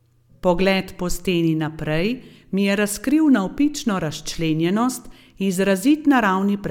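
No technical faults can be heard anywhere in the recording. Nothing in the audio calls for a time stamp or a measured value.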